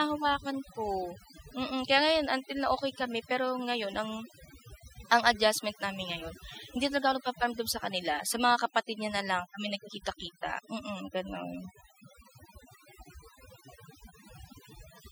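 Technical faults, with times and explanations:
Throughout, overdone noise removal: the background drops and breaks up into twinkling, warbling specks. A noise reducer pushed too hard is switching off individual frequency bands near its noise estimate, taking quieter parts of the voice along with the noise.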